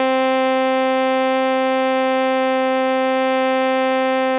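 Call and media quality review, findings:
Music clip: no faults found.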